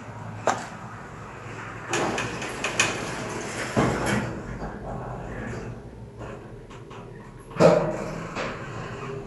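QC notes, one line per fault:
No fault found in this sound clip.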